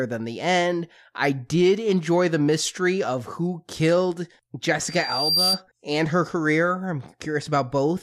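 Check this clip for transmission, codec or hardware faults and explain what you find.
One fault is audible. Loudspeaker feedback squeal from 4.84 to 5.62 s: the microphone re-amplifies its own loudspeaker, so a 4.7 kHz tone swells over about half a second to roughly 5 dB above the speech.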